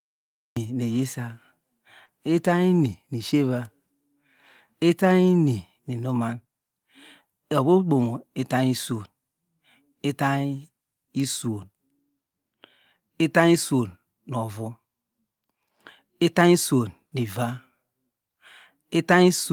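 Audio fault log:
0.00–0.57 s, cut-off start: the speech kicks in abruptly at 0.57 s from dead digital silence, mid-sound, with no natural attack, because the recording began late.
2.05–2.09 s, short concealed packet loss: about 20 ms of audio went missing, and the receiver patched it by extending the previous sound, leaving a brief smeared wobble before blending back.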